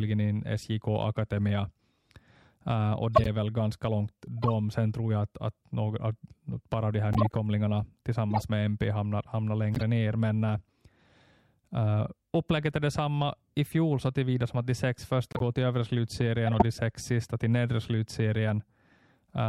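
You get corrupt frame decoded bursts at 3.16–3.27, 4.42–4.50, 7.13–7.35, 8.30–8.44, 9.75–9.82, 15.32–15.42 and 16.47–16.62 s. Damaged compressed frames were played anyway, spraying chirpy, noisy energy at wrong frequencies, loudest around 3.2 and 16.5 s.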